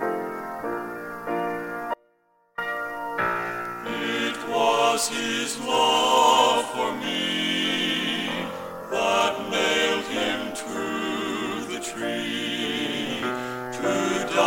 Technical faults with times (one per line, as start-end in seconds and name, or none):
1.94-2.58 audio dropout to a faint residue